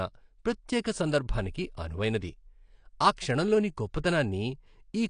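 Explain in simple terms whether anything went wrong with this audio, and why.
Two problems can be heard. Throughout, the speech sounds dull and smeared, with a fizzy, warbling edge on hissy sounds and nothing above about 9.8 kHz. That points to AAC compression, likely at a low quality setting that discards fine detail.

At 3.16 s there is pre-echo: a brief hiss just ahead of a sharp attack, which sounds softened. The codec spreads its noise across a whole block of sound, so noise meant for the loud moment leaks into the quiet instant before it.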